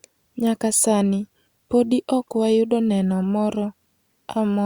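No technical faults can be heard in the speech.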